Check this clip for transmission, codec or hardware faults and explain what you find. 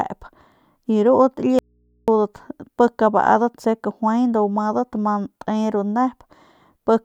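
One fault is present: an audio dropout to a faint residue from 1.59 to 2.08 s. The speech cuts off abruptly for about 0.49 s. Only low mains hum remains, roughly 45 dB below the speech. The likely cause is a lost signal feeding an input that stayed live.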